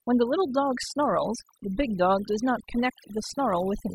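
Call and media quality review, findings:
Overdone noise removal, whole clip. Background drops and breaks up into twinkly specks. Noise suppressor set too aggressive, cutting individual bands near its noise estimate and taking quieter parts of the speech along with them.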